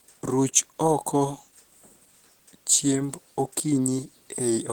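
Opus compression runs throughout: the speech sounds plainly hoarse and muffled, likely from a low-rate encode in its hybrid speech mode, fitting about 16 kbps, while the bandwidth still reaches about 20.2 kHz.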